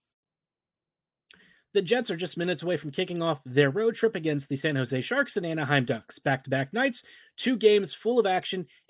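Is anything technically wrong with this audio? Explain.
No, the speech signal comes through intact and steady, with nothing technically wrong to be heard anywhere in it.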